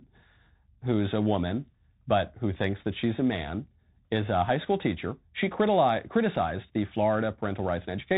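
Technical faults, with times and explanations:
Throughout, Bluetooth CVSD headset codec: the speech is confined to a narrow telephone-like band with nothing above 4 kHz, and the damage is plainly audible. The codec sends a single up-or-down bit per sample and adapts its step size, so loud, fast-rising high sounds outrun the step and distort, sibilants come out scratchy, and a grainy hiss sits beneath the voice, which fits a 64 kbps CVSD link.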